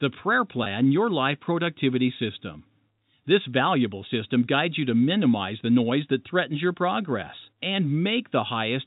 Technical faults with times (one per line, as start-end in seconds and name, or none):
0.64-0.66 packet loss with pitch repetition